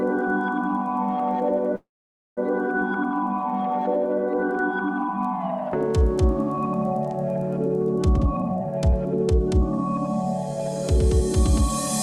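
At 1.75 s a call audio freeze halts the sound for about 0.63 s, likely from delayed packets. A brief fading tail gives way to silence, then the sound resumes intact.

From 8.18 to 8.93 s a jitter buffer speed-up trims about 0.4 s in short pitch-period cuts. The sound runs at 147% speed, hurried but unchanged in pitch.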